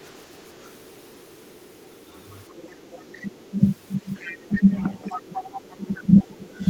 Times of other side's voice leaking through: 0.00-4.60, 5.09-6.26

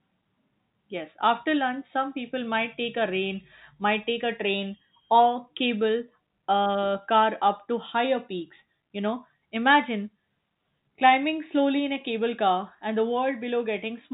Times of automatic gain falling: none

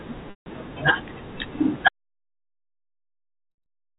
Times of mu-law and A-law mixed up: none

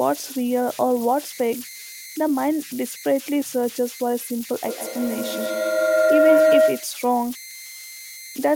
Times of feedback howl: 4.64-7.10

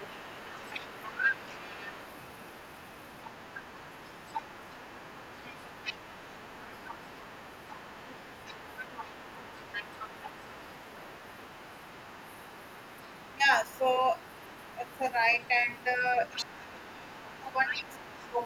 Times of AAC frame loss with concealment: none

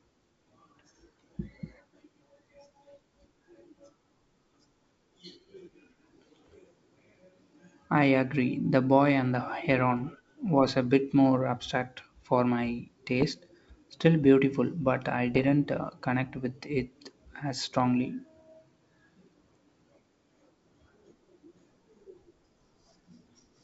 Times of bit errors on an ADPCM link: 6.45-6.55, 13.21-13.27, 15.34-15.48

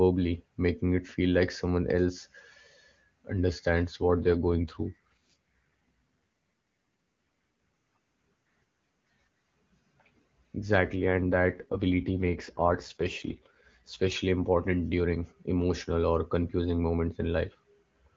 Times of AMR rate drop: 4.09-5.35, 11.00-14.12

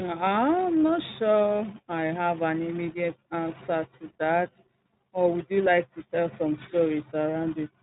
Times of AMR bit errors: none

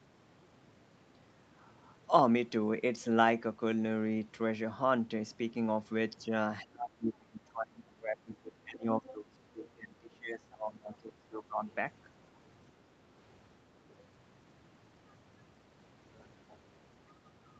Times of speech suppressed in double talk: 6.28-6.32, 6.63-11.64

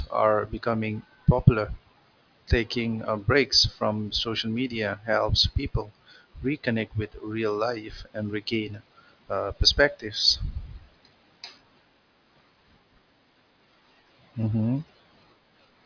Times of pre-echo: none

